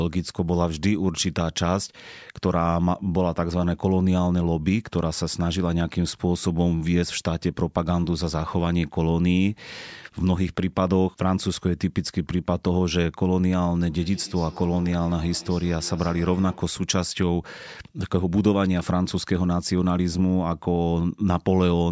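From 13.9 to 16.75 s, the speech picks up a feedback echo between two devices. Two devices in one room were likely on the same call. One played back what the other's microphone sent, and that microphone heard it again. Neither echo canceller removes sound played by the other device. Each syllable returns at a regular interval of roughly 150 ms. The repeats peak about 21 dB below the speech and sound thinner and ringing, above call audio that stops at 8 kHz.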